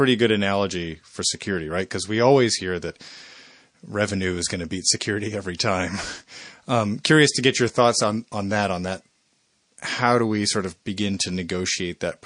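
It's a speech recording with plainly audible codec damage throughout: a watery, swirly quality and metallic chirps on s sounds. That's most likely MP3 compression, and the damage level fits a low bitrate of around 40 kbps, where the encoder starves the upper frequency lines. There's also a pre-echo from 5.57 to 5.59 s, a short hiss about 11 dB up that spreads roughly 24 ms ahead of a sharp attack. The encoder seems to have stayed on long blocks, so the noise meant for the loud onset leaks backward into the quiet just before it.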